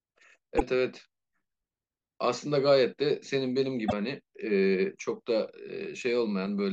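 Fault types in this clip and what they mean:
Damaged data in a compressed stream: The speech is broken twice by a short glitch, heard as a chirp, squawk, click or brief hole, at 0.57 to 0.62 s and at 3.85 to 3.93 s, each about 50 to 80 ms long. Part of the compressed stream there is corrupt, through lost, zeroed or overwritten bytes, so the decoder misreads or refuses those frames, loses its place, and searches until it locks onto a valid frame header again.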